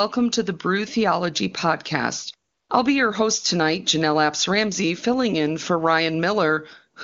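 From 2.51 to 2.69 s, just before "I'll be your host", the sending phone's voice activity detection decided the talker had gone quiet and stopped transmitting speech frames for about 180 ms. This is AMR comfort noise: the receiver fills that gap with synthetic noise built from a rough estimate of the background's level and spectral shape. The real room sound drops out and a smooth, steady hiss takes its place, switching in and out against the clean wideband speech on either side.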